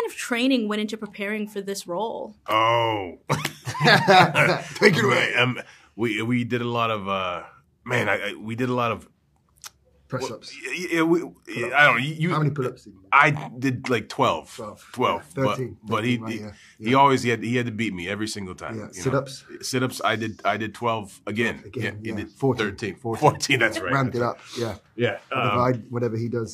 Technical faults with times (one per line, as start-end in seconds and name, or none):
19.55 compressed frames skipped